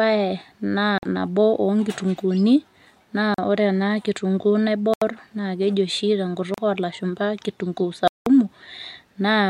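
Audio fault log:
0.98 to 8.27 s: Bluetooth stall, five gaps at 0.98, 3.34, 4.94 (ending just before "naa keji"), 6.54 and 8.08 s, lasting 48, 40, 79, 37 and 187 ms. Each time the speech drops to silence, then resumes where it stopped, likely because the headphone buffer ran dry while delayed packets were resent.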